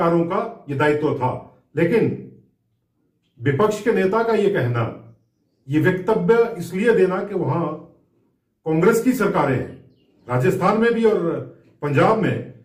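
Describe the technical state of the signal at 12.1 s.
At 12.1 s the signal is intact, with no dropout, clipping, distortion or other fault audible at that moment.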